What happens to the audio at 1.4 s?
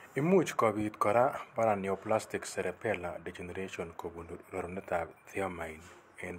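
Nothing goes wrong at 1.4 s: the speech carries on cleanly there, with no dropout, click, distortion or other fault.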